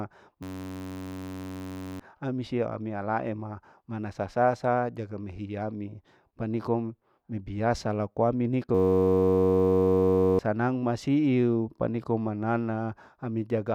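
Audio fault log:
0.43–2.00 s system hang loop: the system froze and kept replaying one 10.67 ms slice, likely a 512-sample buffer, heard as a steady 93.8 Hz buzz; about 1.5 s lost.
8.75–10.39 s system hang loop: the same frozen 10.67 ms buffer cycled again, producing an identical 93.8 Hz buzz and wiping out roughly a second and a half of speech.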